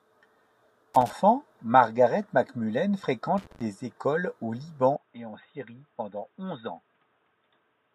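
A speech clip with irregular bursts of scratchy crackle from 0.94 to 1.13 s and 3.38 to 3.62 s: loose connector crackle, where a worn contact intermittently breaks the signal. From 4.96 s to the end the sound turns dull and boxy with no gap, losing everything above 3.8 kHz and dropping roughly 10 dB, over a new noise floor some 45 dB down; the input was likely switched to a poorer device.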